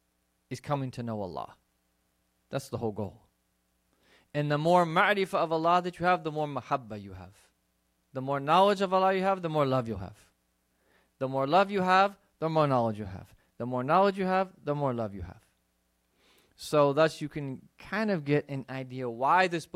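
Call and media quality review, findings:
No faults found in this speech recording. The audio is continuous throughout, with no dropouts, glitches or level problems to log.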